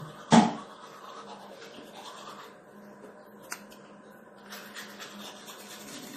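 From start to finish, the sound carries plainly audible MP3 compression damage, likely from an encoder starved of bits, with the swirl pointing to a low rate around 40 kbps. Weak frequency components flicker in and out between frames, giving a watery, swirling texture with metallic chirps on bright content and smeared attacks. A simple low-pass filter would dull the top end just as cleanly but leave no such warbling.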